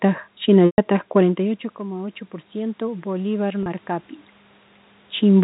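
From 0.66 to 0.78 s there is packet loss with pitch repetition. About 120 ms of audio went missing, consistent with four 30 ms packets, and the receiver filled the hole by looping the last pitch period while fading it down. It sounds like a brief buzzy hold on the sound rather than a clean click or hard silence. That synthetic sustain is what separates concealment from a plain dropout.

From 1.19 to 3.91 s the automatic gain is rising. Just before this, around 1.0 s, the talker moves away from the microphone and the input level falls by about 16 dB. The control then climbs about 6 dB over nearly three seconds. The room noise swells along with the voice, and that shared, slow lift points to gain control rather than movement, since a talker leaning closer would raise only the voice.

From 3.63 to 3.66 s a second, shorter packet loss with pitch repetition covers about 30 ms, fitting a single lost packet. 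It is short enough that it comes across as a momentary held, slightly buzzy tone with no fade into silence. It is bandlimited below 4 kHz like the rest of the G.711 telephone audio.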